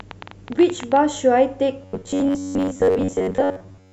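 A train of clicks runs from the very start to 0.97 s, about 14.6 per second at an uneven pace, roughly fifteen pulses in all, with peaks around 5 dB above the speech. The pulses share much the same shape and tick over the voice and the gaps alike. The likely source is something injecting repeated spikes, such as electrical interference from nearby equipment or a faulty connection or power supply.

Robotic sound from repeated short buffers takes over from 1.82 s to the end of the clip. The voice becomes a rigid, metallic buzz fixed at 93.8 Hz while still loosely tracking the speech. That pitch corresponds to a period of about 10.7 ms, which fits the software likely repeating a buffer of that length whenever fresh audio arrives late. Most of the real signal, perhaps two thirds or more, is skipped and replaced by these repeats.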